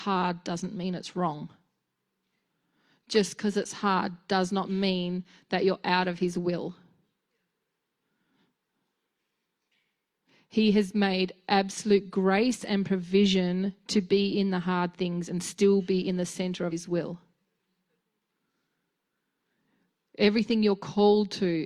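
Speech with one burst of damaged data in a compressed stream at 16.68 to 16.73 s, right after "be in the center". Corrupted bytes make the decoder misread frames and lose sync, giving a brief glitch that shows as a blocky broadband smear on a spectrogram and a jagged discontinuity in the waveform.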